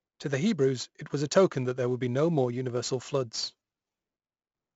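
Throughout the speech, 4-bit ADPCM compression stores each sample as a coarse step from a prediction. At 64 kbps, which fits a 16 kHz sample rate, nothing reaches above 7.7 kHz. Heavy gritty hiss rides every loud passage, with roughened attacks and a dulled top end.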